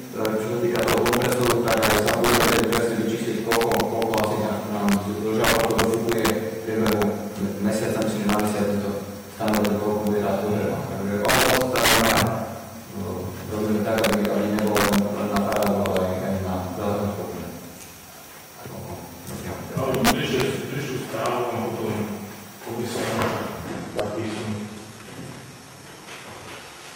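From the start and through the whole clip there is integer overflow. The signal was pushed about 10 dB past full scale, and instead of being limited, each excess sample wrapped around to the opposite sign. Only the loudest peaks, well under one percent of samples, cross the limit, but each one snaps across the full range and produces a violent crack far harsher than clipping. On a waveform these show as spikes jumping from top rail to bottom rail, and on a spectrogram as thin broadband vertical lines.

From 23.67 s to the end, an adaptive stream at a lower bitrate takes over. The connection evidently slowed, and playback switched abruptly, with no gap, from a higher-bitrate encoding to a much leaner one. The change fits a drop from something like 96 kbit/s AAC-LC to a 16 kbit/s HE-AAC version. The treble turns synthetic as the upper band becomes reconstructed rather than coded, and artefacts rise. 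On a spectrogram the content above 12.3 kHz vanishes at the switch point.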